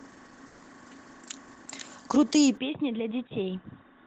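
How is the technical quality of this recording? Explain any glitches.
Two glitches are worth flagging in this speech clip, one brief and one that runs to the end.

From 0.47 to 0.61 s there's what sounds like a call audio freeze. The most likely cause is packets stalling in transit until the jitter buffer ran dry. The receiver bridged the gap by stretching the last bit of sound into a short buzzy, fading fill, about 120 ms of it. Once the packets arrived, playback picked up exactly where it paused, so nothing was lost. Everything after that point just runs about 120 ms late.

At 2.57 s the sound changes abruptly and stays that way to the end, which points to the input having switched to a poorer device, likely a different mic or a headset's call profile. There's no silence at the change. The top end suddenly stops at 3.8 kHz, so the speech turns dull and boxy. The level drops by a few dB, and a faint new noise floor sits well below the speech. 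That combination is the typical signature of a lower-bandwidth input taking over mid-recording.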